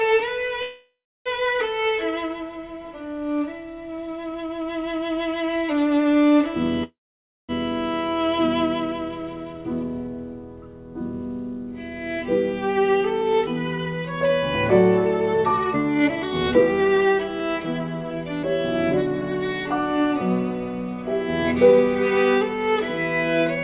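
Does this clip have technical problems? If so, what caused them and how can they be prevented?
Yes. Two kinds of fault are present, heard through a call codec whose sound fits narrowband G.711 A-law, with nothing above 4 kHz.

Call audio freeze, at 0.62 to 1.29 s and 6.84 to 7.52 s: packets were likely delayed in transit, so the jitter buffer drained. The receiver stretched the last sound into a fading buzz, with roughly 0.33 s and 0.56 s of outright silence, then resumed where it stopped. Each event inserts a gap of about 0.64 to 0.65 s without losing content. Prevention: give the call a steadier, prioritised network path, such as wired rather than congested Wi-Fi, with QoS marking.

Jitter buffer speed-up, at 12.78 to 14.29 s and 15.34 to 18.44 s: the buffer held more audio than it aims for. The receiver trimmed it back by repeatedly cutting out pitch-period-sized slices. The first stretch plays at 110% speed and drops a small fraction of a second. 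The second plays at 134% and sheds about a second, sounding noticeably rushed while keeping its pitch. Prevention: fix the underlying network jitter and let the buffer shrink more gradually.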